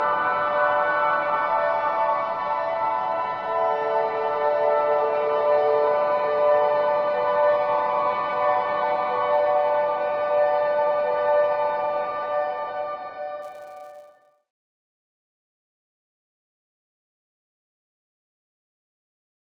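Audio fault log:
13.42–19.47 s, filter restarted on every block: the filter loses its memory at each block boundary and restarts from silence, so every block opens with a transient. These repeat as a 188 Hz buzz, which fits a 256-sample block, tracking the sound's level.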